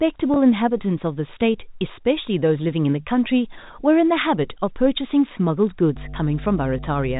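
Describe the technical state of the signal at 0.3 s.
Packet loss with pitch repetition occurs from 0.34 to 0.36 s: about 20 ms of audio, consistent with a single lost packet, is bridged by repeating the last pitch period, giving a briefly held, buzzy sound. On a spectrogram, the harmonics flatten into frozen horizontal bands. On the waveform, one identical cycle repeats. The 4 kHz ceiling of the telephone coding stays visible throughout.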